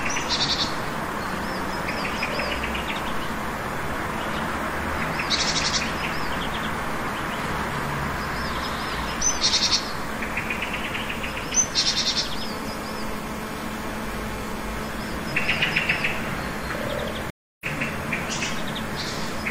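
A recording of sounds that drops out at 17.30 s for about 0.31 s and comes back at 17.66 s roughly a fifth of a second further on. This is a stream reconnect: the connection broke, the player restarted its decoder, and playback rejoined the stream later.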